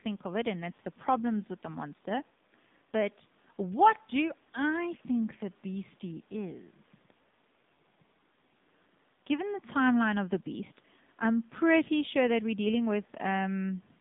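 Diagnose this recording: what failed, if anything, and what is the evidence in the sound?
AMR narrowband mobile codec damage runs throughout, at the codec stage. The speech is confined to roughly 150 Hz to 3.7 kHz, with nothing above 3.8 kHz, and sounds plainly buzzy and synthetic. That fits a low 7.4 kbps mode, where too few pulses drive the vocal-tract model.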